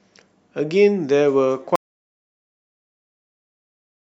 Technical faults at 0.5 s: none

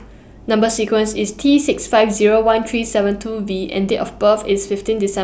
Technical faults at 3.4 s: none

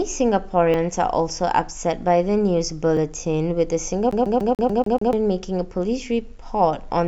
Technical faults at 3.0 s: dropped buffer (overrun)

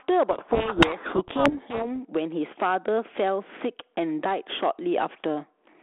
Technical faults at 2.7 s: gain pumping

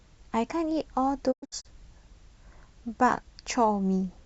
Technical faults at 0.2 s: none

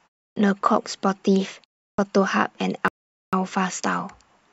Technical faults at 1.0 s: none

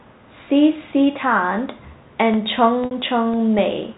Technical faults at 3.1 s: periodic USB or driver dropouts

